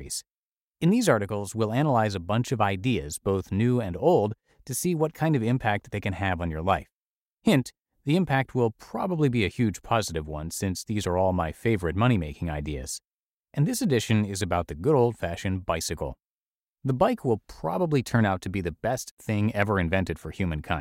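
Listening closely to the speech, nothing technical stood out at any point.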